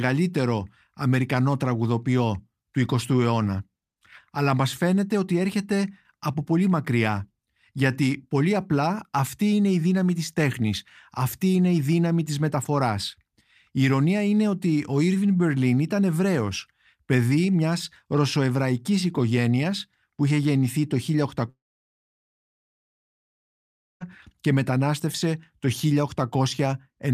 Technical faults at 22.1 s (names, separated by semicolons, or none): long network dropout